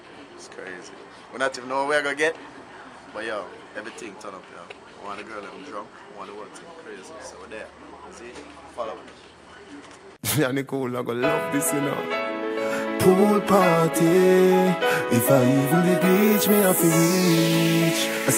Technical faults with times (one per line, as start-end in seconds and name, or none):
none